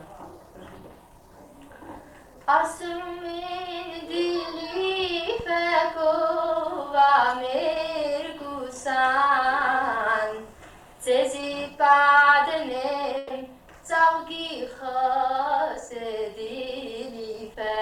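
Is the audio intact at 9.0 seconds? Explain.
Yes, the audio is intact at 9.0 seconds, with no dropout, click, distortion or other fault to be heard there.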